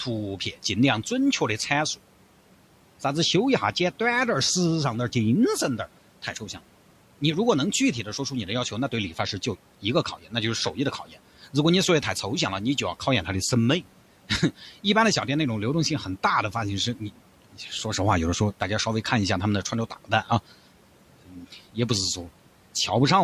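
A speech recording where the noise suppressor bites into the talker a few times, mistaking quiet speech for background and pulling it down. It happens at 10.17 to 10.33 s (about 12 dB), 11.08 to 11.17 s (about 11 dB), 19.9 to 20.3 s and 21.26 to 21.53 s (about 10 dB each). Each dip leaves a soft consonant or word ending sounding swallowed for roughly a tenth of a second, a bit longer in the last one. The room noise underneath sits about 23 dB below the speech.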